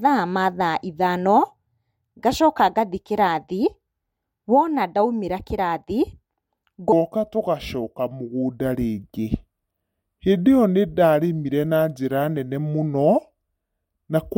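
From 6.92 s onward, a section at the wrong speed, 0.766x, likely a clock mismatch: speech slows and drops about five semitones, with spectrogram harmonics sliding lower.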